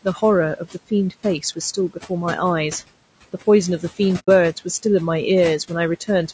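Throughout the clip, noise suppressor artifacts appear: the background is pulled down by about 18 dB between phrases and swells back under speech. Also throughout, the speech sounds rough and grainy with noise between harmonics, likely from low-delay AAC compression such as AAC-ELD at a low bitrate near 32 kbps, distinct from suppressor warble because it rides on the voice itself. At 4.19 to 4.29 s, an AAC frame loss with muting fades the sound out and back in, a soft-edged hole of about 0.1 s.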